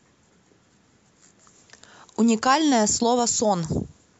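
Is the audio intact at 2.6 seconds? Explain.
No, not quite. At 2.6 s we're still inside the low-bitrate start of an adaptive stream, which runs from 0.0 to 2.7 s. The treble is dull and codec artefacts are strong, which fits an MP3 around 48 kbit/s. Then it jumps cleanly to fuller quality, consistent with 128 kbit/s, with no gap.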